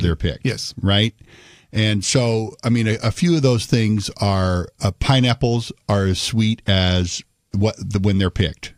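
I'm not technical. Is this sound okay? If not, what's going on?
Yes, this recording sounds fine. There's nothing in it that stands out as a technical problem.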